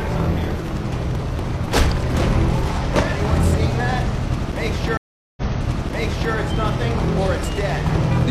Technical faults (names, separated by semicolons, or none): stream reconnect